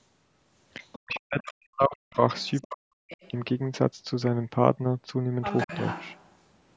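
An echo canceller on the talker's end likely failed to remove the far end's loudspeaker sound from the microphone in this speech recording, so the other side's voice is leaking through at 0.92 to 1.2 s, 2.41 to 2.65 s, 3.09 to 3.31 s and 5.42 to 6.27 s. These are faint scraps of a second voice, roughly 15 to 30 dB below the main talker, with the last and longest stretch the most audible. Where both sides talked at once, the same canceller likely could not tell the local talker from the echo and turned everything down, so speech is suppressed in double talk from 1.0 to 2.21 s and again from 2.68 to 2.92 s. The talker's voice drops sharply in level, by as much as about 40 dB, across about a second of the first stretch. The call's microphone processing limits the audio to 8 kHz and removes the deepest bass.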